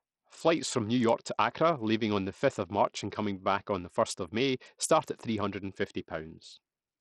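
Speech with heavy Bluetooth SBC compression throughout: treble flickers and drops out over gritty quantisation noise, which fits a low bit pool around 64 kbps, likely SBC. On a spectrogram, upper sub-bands appear patchy and blocky.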